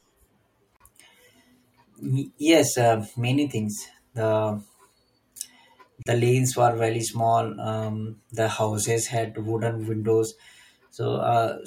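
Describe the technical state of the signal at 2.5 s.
At 2.5 s the signal is intact, with no audible technical fault at that moment.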